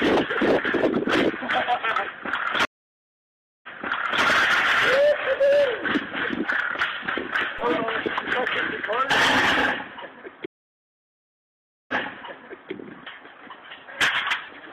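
The audio has two stream reconnects and one DC step. The first stream reconnect starts at 2.65 s. The sound cuts to about 0.98 s of silence. It resumes about 0.6 s earlier than where it stopped, so a short stretch repeats. Playback settles by 4.23 s. The second stream reconnect starts at 10.46 s, with about 1.43 s of silence. It resumes about 0.84 s earlier, so a longer stretch repeats. It settles by 12.72 s. Each time the connection dropped, the player reconnected, and a fresh decoder picked up a resent burst of the stream. The decoder's first frame fades in. At 7.59 s a DC step gives a single low thump. The waveform's zero line jumps to a new offset and then drains away, as a high-pass filter near 5 Hz would pull it back. The sound itself continues unchanged through the thump.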